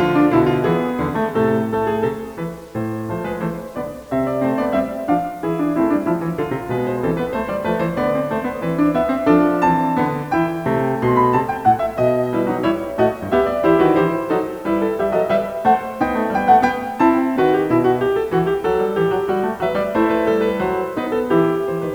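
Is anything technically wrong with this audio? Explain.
Yes. Throughout the music, quiet passages turn gritty. This is likely low bit depth without dither, near 8 bits with rounding, putting grainy error roughly 35 dB below the music. Unlike steady hiss, the grain follows the signal and vanishes in silence.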